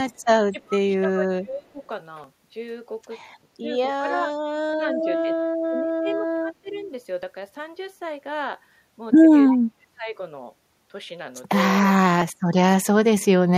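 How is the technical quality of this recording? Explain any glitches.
The recording has three kinds of glitches from the call chain: a faint echo leak, a voice that gets pushed down during double talk, and two tiny chunk-boundary skips.

Echo leak shows up twice, briefly at 0.11 to 0.18 s and again at 6.08 to 6.12 s. Both times there's a ghost copy of the voice trailing by 325 ms, sitting very low, around 40 dB under the main speech. That's most likely a far end on a loudspeaker whose echo canceller didn't fully scrub what its mic picked up, so a little of the audio got sent back.

Speech suppressed in double talk is the most frequent problem. It happens at 0.63 to 1.81 s, 3.60 to 3.68 s, 4.00 to 4.34 s, 5.24 to 5.41 s, 5.67 to 6.91 s and 9.50 to 10.17 s. The voice sinks noticeably in each, from a mild dip of about 10 dB up to roughly 35 dB in the 9.5 s stretch, so parts of it nearly vanish. 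The likely reason is both ends talking at once, with the echo canceller unable to separate the live talker from loudspeaker echo, so it ducked everything.

Audio missing between chunks occurs at 2.24 s and 12.22 s. Each is a tiny skip, just a few milliseconds dropped, with the two sides spliced together and no gap, so you'd hear a small tick or jump rather than silence. The spacing fits a processor working in 2.5-second chunks, likely losing a sliver each time it closes one chunk and opens the next. The loss is too short to eat a syllable here.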